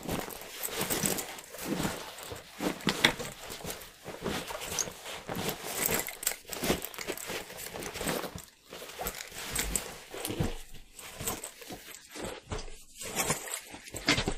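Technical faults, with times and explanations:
11.84 to 14.38 s, adaptive stream at a lower bitrate: the quality drops suddenly with no gap, as if the stream switched down to cope with a slower connection. The top end is gone above 15.2 kHz and the artefacts thicken, which fits a step from roughly 128 to 40 kbit/s MP3.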